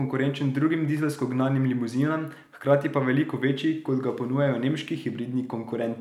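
No technical faults can be heard anywhere in the speech.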